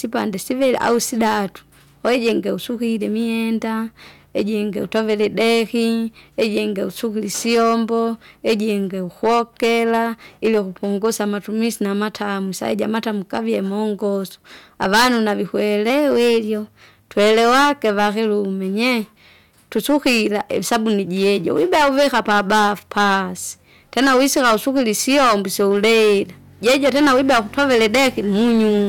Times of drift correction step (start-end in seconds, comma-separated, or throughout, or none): 15.90-16.88